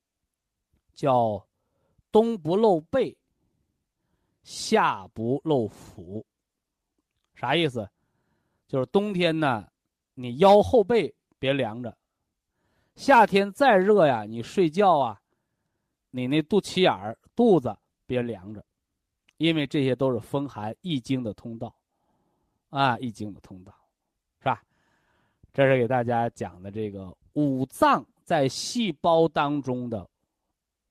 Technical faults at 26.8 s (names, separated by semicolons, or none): none